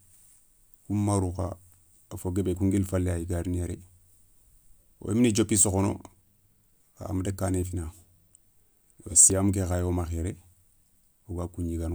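Speech with small forward jumps at 2.55, 7.63 and 9.30 s, likely dropped buffers (overrun), losing about 10, 10 and 30 ms; unlike dropouts, no silence intervenes.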